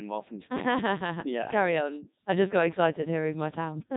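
The whole clip sounds heavily robotic and buzzy: a Codec 2 vocoder rebuilt the speech from sine waves, fitting its 3.2 kbit/s mode.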